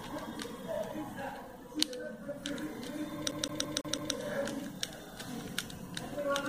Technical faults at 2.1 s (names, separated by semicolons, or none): none